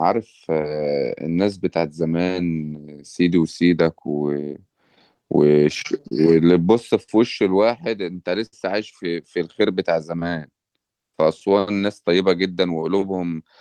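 Clock drift between sender and receiver runs through the whole speech clip. The sender's clock runs about four percent slow, so the receiver's buffer keeps draining. Repeated timing corrections from 0.15 to 13.27 s stretch the audio to 97% speed by repeating short pieces, adding roughly 0.4 s and giving an unevenly dragging tempo. Scattered short gaps between 4.96 and 7.09 s are about five small holes, the longest around 50 ms, each patched by continuing the last sound and heard as brief smears or ticks. A short stall from a late packet at 8.46 to 8.54 s empties the jitter buffer, so the last sound is held for 64 ms with a slight buzz or dip before resuming where it left off.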